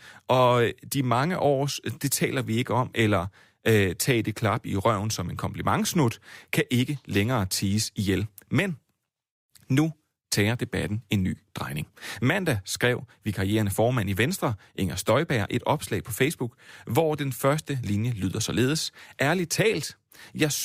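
No technical faults can be heard anywhere in this speech.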